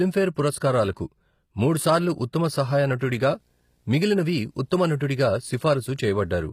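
Throughout, the treble sounds gritty and metallic, with nothing above 15.5 kHz, likely HE-AAC compression replicating upper bands from lower ones, which fits a low bitrate near 24 kbps; a spectrogram shows copied, blocky high bands. At 2.99 s, pre-echo places about 18 ms of hiss before a sharp attack, seen as a smeared vertical streak ahead of the onset. From 3.29 to 6.48 s, video or display buzz couples in at 60 Hz, well below the speech level, drawing a steady horizontal line with harmonics.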